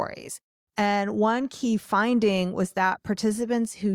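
Nothing in this speech recording stood out as a technical problem on listening.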